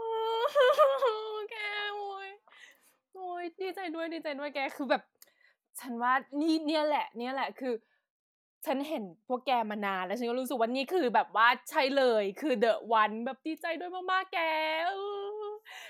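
No technical faults are audible.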